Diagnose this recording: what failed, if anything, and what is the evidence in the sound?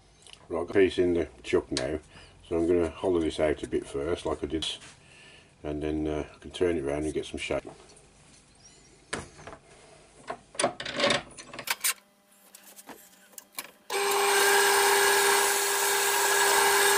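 The failure is at the codec stage: damaged data in a compressed stream. You get three short blips, at 0.72 s, 4.62 s and 7.60 s, each a brief chirp, squawk, click or short hole that cuts across the sound. What's happening is that part of the encoded stream is corrupt at those points, so the decoder can't make sense of the frame there, loses sync for a moment, and hunts for the next valid frame header before it picks up again.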